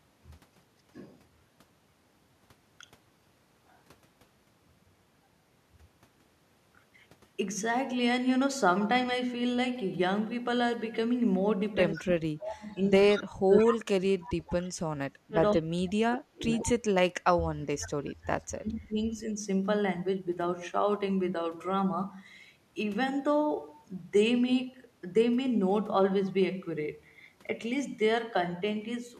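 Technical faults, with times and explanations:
11.76–19.29 s, speech suppressed in double talk: the voice keeps dipping and breaking up, about 5 s of it in all, dropping by up to about 35 dB at worst. Both ends were likely talking at once, so the echo canceller turned down the near talker along with the echo.
11.92–11.98, 12.71–12.75, 13.13–13.22, 13.57–13.77, 14.27–14.5 and 15.53–15.62 s, echo leak: short scraps of the voice come back 150 ms late, from about 40 dB under the speech up to about 10 dB under at 13.57 s. That's likely a loudspeaker's sound slipping past the far end's echo canceller.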